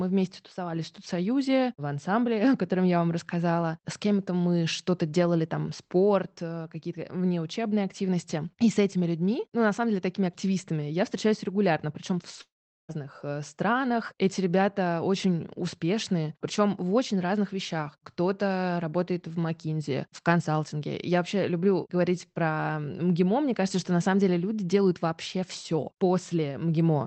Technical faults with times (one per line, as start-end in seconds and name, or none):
12.41-12.91 long network dropout